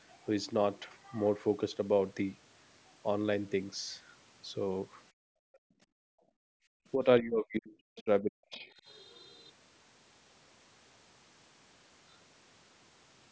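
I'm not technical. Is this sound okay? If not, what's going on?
No. The call's echo canceller, which stops the other person's voice from bouncing back through the microphone, stepped in too heavily in a few places.

First, background gated by the echo canceller. While the loudspeaker was playing, the canceller turned the microphone almost fully off, so the room sound drops away to near silence from 5.11 to 5.79 seconds and again from 6.47 to 6.66 seconds. Each time it comes back as soon as the canceller releases, leaving brief, unnatural holes in the background.

Second, speech suppressed in double talk. The talker's voice almost vanishes for a split second at 6.07 to 6.19 seconds, then again for most of the stretch from 6.94 to 8.69 seconds. The likely cause is both people talking at once, so the canceller couldn't tell the talker apart from the loudspeaker echo and turned everything down together. 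The voice is pushed far down, nearly gone.

Third, the other side's voice leaking through. At 7.98 to 8.03 seconds a brief, faint scrap of a second voice slips into the recording, well below the talker's level. It is likely loudspeaker sound the canceller failed to remove from the microphone. It is short, but it shouldn't be there.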